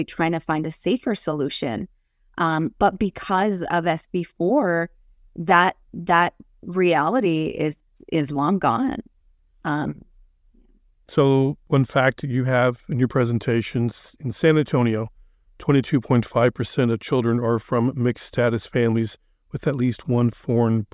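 Nothing goes wrong at any point in this stretch of speech, so there isn't a single fault to flag along the way.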